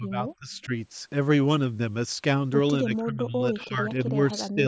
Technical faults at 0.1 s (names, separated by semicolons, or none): speech suppressed in double talk